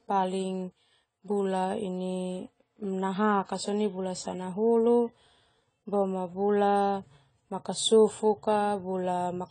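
From start to finish, the speech has most likely passed through AAC compression at a low bitrate, consistent with AAC-LC running at around 24 kbps. Short of bits, the encoder discards the top of the spectrum and quantises the remaining bands coarsely, so nothing survives above 10 kHz. The speech sounds dull and smeared, with plainly audible damage: sibilants turn fizzy and sustained sounds take on a watery warble.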